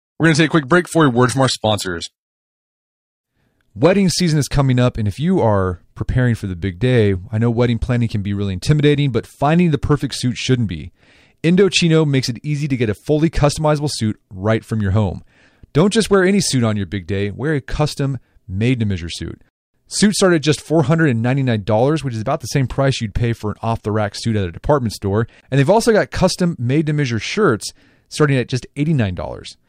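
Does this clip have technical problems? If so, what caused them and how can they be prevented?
Yes. The adaptive stream started at a low bitrate, likely HE-AAC at 20 kbit/s, so from 0 to 4.0 s the treble sounds synthetic and artefacts are strong. It then steps up without a gap to what sounds like 96 kbit/s AAC-LC, with nothing above 14.9 kHz. To prevent this, start playback on a higher rendition or measure bandwidth before playback begins.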